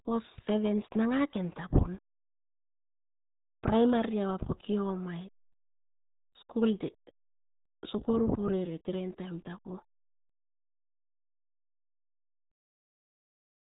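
Speech runs through the RealAudio 14.4 codec for the whole clip, and the damage is heavy. This dial-up era codec squeezes audio into about 8 kbit/s, so everything above 3.8 kHz is gone, leaving speech muffled with a gargling, watery texture. On a spectrogram the energy stops at a flat ceiling near 3.8 kHz with an empty band above it, and the harmonics below look smeared and blotchy rather than cleanly striped.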